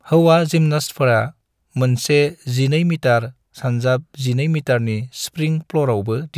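No technical faults can be heard anywhere in this speech recording. There is nothing to place on the timeline and no event that needs explaining.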